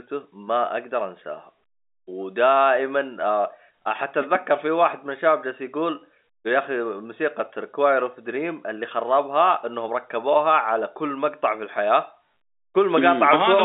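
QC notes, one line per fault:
No faults heard.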